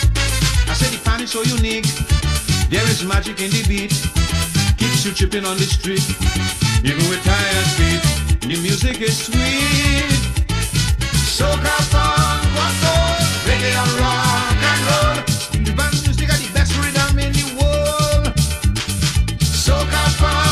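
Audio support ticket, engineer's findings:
No audible faults found; nothing to escalate.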